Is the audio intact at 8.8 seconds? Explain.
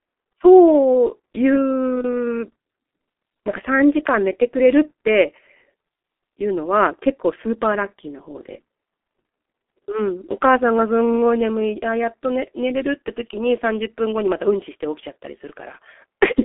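No. G.723.1 codec damage is present at 8.8 s, as it is across the whole clip. This low-rate telephony codec squeezes speech through a narrow line, roughly 250 Hz to 3.5 kHz, leaving nothing above 3.8 kHz. It models the voice in coarse 30 ms frames at a rate that fits about 6.3 kbit/s, so the heavy damage here sounds muffled and hoarse, with consonants smeared and dull.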